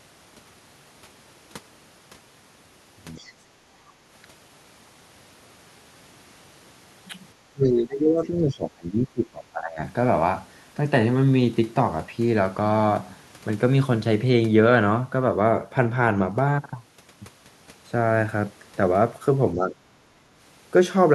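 The clip is speech, and it has two kinds of echo-canceller trouble. From 3.15 to 3.33 s there is the other side's voice leaking through: a brief, faint second voice sits far below the talker, roughly 30 dB down. It is likely residual loudspeaker echo that the canceller failed to subtract from the microphone signal. Speech is suppressed in double talk from 7.38 to 9.81 s. For about two seconds of that span, the talker's level sinks, at its deepest by around 20 dB. The likely cause is both sides talking at once. The canceller could not tell the near voice from the echo, so it attenuated everything. A shorter dip follows from 19.55 to 19.76 s. There the voice drops by around 10 dB, which likely comes from the same double-talk suppression.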